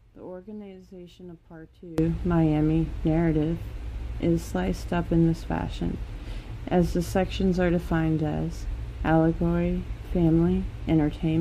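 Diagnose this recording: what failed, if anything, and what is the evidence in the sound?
For the first 1.98 s the sound drops about 21 dB, likely one channel inverted in the wiring, so shared content cancels in mono.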